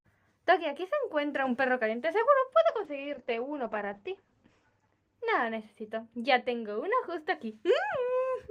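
From 2.71 s to 7.47 s there's a call bitrate drop: the bandwidth estimate collapsed and the encoder got starved of bits, sliding from what sounds like around 128 kbps down to roughly 11 kbps. At that rate it codes much more coarsely and throws away the top end, with the audio band narrowing to about 8 kHz. You hear it go muffled and rough, worst for about 2.2 s at the bottom, before clarity returns.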